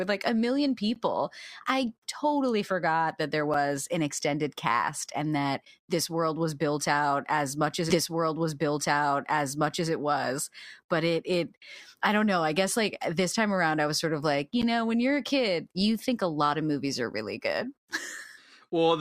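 Blocks of digital silence occur at 0.94 s after "like a million" (about 13 ms), at 3.54 s (about 6 ms, which fits a 256-sample buffer) and at 14.62 s after "sort of like you" (about 12 ms, which fits a 512-sample buffer). The output buffer most likely wasn't filled in time, so the audio drops abruptly to zero and returns; gaps this short are heard as a tick or dip rather than silence. At 7.89 s, after "out as much as", a repeated stream segment replays 2 s of programme, with a small blip at the jump back before "it was".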